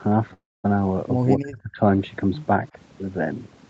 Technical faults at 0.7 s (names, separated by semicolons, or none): overdone noise removal; call audio freeze